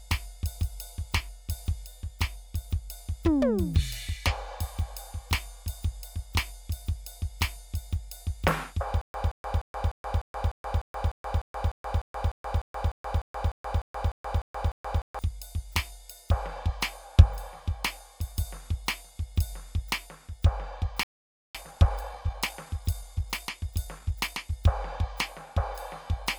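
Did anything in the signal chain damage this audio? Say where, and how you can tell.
Yes. A stutter with silent gaps runs from 9.01 to 15.19 s in the music: a 173 ms fragment repeats twenty times at a steady 300 ms period, each followed by 127 ms of digital silence. This is likely a stalled playback buffer replaying its last block on each retry, so the intended audio is lost.

A playback stall follows at 21.03 s, where the music cuts to silence for about 513 ms before resuming at 21.55 s. The likely cause is the player's buffer running dry or its output thread being blocked until data returned.

Time-compressed catch-up runs from 21.55 to 24.55 s. The music plays about 1.15 times faster at unchanged pitch. The player is recovering the backlog from the stall by cutting out short slices and cross-fading across the joins.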